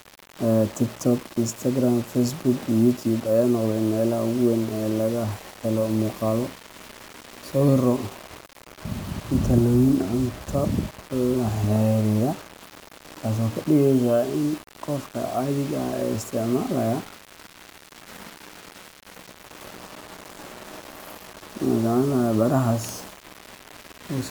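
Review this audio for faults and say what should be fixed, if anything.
Grainy, gritty distortion runs through the whole speech clip, following the signal and sitting only about 20 dB below it, with the quietest passages dropping to silence or sputtering. This is likely low bit depth without dither, rounded to a coarse level grid that fits roughly 6 bits. Keep the working resolution at 16 bits or more, and add dither whenever the word length has to be reduced.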